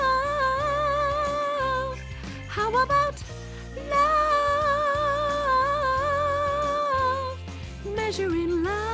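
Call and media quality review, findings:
No faults found; the call path sounds like G.722 wideband, with nothing above 8 kHz, as expected for that codec.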